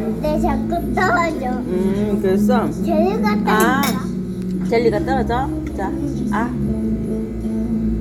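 No technical faults are audible.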